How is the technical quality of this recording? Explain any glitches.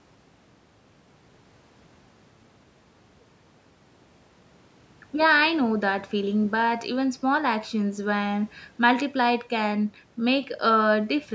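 The recording shows no technical glitches: the speech comes through a call's microphone processing, which trims the lowest bass and leaves nothing above 8 kHz, and that shaping is how such a path normally sounds rather than a fault.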